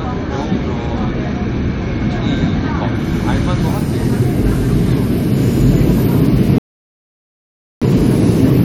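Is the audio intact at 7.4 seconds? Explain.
No. At 7.4 seconds the sound has dropped to silence, within a rebuffering stall from 6.58 to 7.82 s. The player ran out of downloaded audio and paused until more arrived, then resumed exactly where it stopped, adding about 1.23 s without losing any content.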